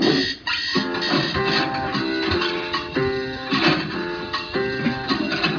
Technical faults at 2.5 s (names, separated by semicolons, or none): none